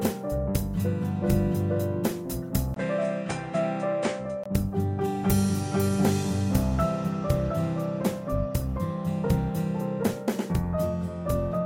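At 2.74 s a brief gap of about 20 ms opens, and until 4.46 s the sound turns duller, with nothing above 9.5 kHz and a faint new noise well below it, likely from the input switching to a poorer device. That switch gap and changed noise floor set it apart from simple filtering.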